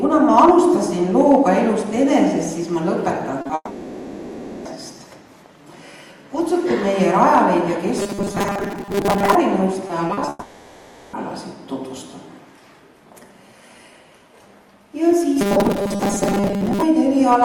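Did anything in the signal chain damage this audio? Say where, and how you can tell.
Yes, and mostly on the network side, with a buffer problem on the playback end too.

Short concealed packet loss shows up right at 3.41 s. There's a 40 ms hole from 3.41 to 3.47 s, then a 20 ms one running to 3.51 s. You hear a quick smear where the decoder stretched the last bit of sound to cover packets that never showed up in time, then crossfaded back into real audio. Sixty milliseconds gone in total, just before things get much worse.

The long network dropout follows almost immediately, from 3.55 to 4.67 s, about 1.1 s with nothing real arriving. The concealment drags the last sound out and lets it decay, with a short near-silent tail of around 30 ms before the audio resumes. A second one runs from 10.29 to 11.15 s, 840 ms, with no silent tail at all. That's likely a stalled link rather than anything local, since the audio picks up further on with that stretch simply missing.

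Robotic sound from repeated short buffers appears twice, 7.99 to 9.35 s and 15.41 to 16.82 s. Both stretches carry a rigid, metallic buzz at 200 Hz that still loosely tracks the underlying sound. That pitch fits a 5 ms chunk being replayed over and over, covering most of each stretch, while the real audio gets skipped. The likely culprit is a driver or audio buffer starving rather than the network.

Repeated packet loss, the robotic kind, hits from 9.87 to 10.29 s, just ahead of the second dropout. There are five separate gaps totalling 120 ms, the longest 40 ms, so about 29% of that span is patched rather than real. Each hole gets filled by extending the previous sound, and the next one lands before it recovers, which gives that choppy, mechanical texture with bits missing.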